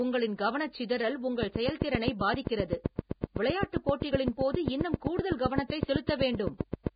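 Heavy low-bitrate coding, likely Vorbis compression at a rate near 16 kbps, runs through the whole speech clip. The coder discards everything above 4.9 kHz and quantises the remaining treble so coarsely that detail turns into noise, giving a dull, hissy, grainy sound with blurred attacks.

From 1.43 s, right after "உங்களின் கவனசிதறல்", to 6.88 s, a train of clicks sits over the audio, likely from interference or a faulty connection or supply. About forty similar pulses arrive at a regular 7.7 per second, around 20 dB above the signal, and are heard as steady ticking, including in pauses.

From 3.21 s to 3.24 s, and again at 6.06 s, there is pre-echo. The codec spread quantisation noise across a block containing a sharp attack, so for about 25 ms and 14 ms respectively a short hiss comes before the attack, which sounds smeared.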